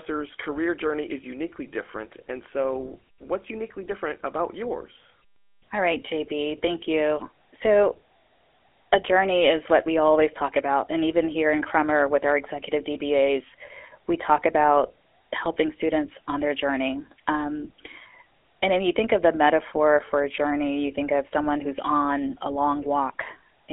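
Throughout, the speech has passed through a GSM full-rate codec. Pulse-excited vocal-tract modelling gives a buzzy, gravelly roughness. Nothing above about 3.7 kHz remains.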